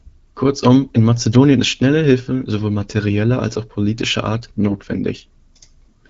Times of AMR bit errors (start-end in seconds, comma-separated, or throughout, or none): 4.68-4.78